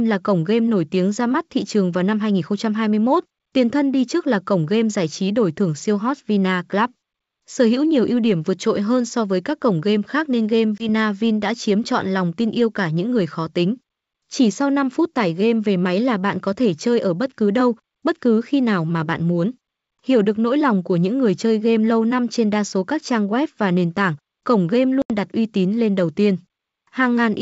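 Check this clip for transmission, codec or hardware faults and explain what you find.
Two short dropouts are present, both packet loss on an ADPCM call carried over G.722 wideband coding at what sounds like 64 kbit/s.

From 10.78 to 10.89 s and again from 25.02 to 25.11 s, the speech cuts to hard-edged silence, about 20 ms and then 80 ms, fitting roughly one and then a few lost packets. Each time, speech returns with brief, slight distortion. This happens because the receiver's adaptive predictor and step size drift from the sender's until they resynchronise.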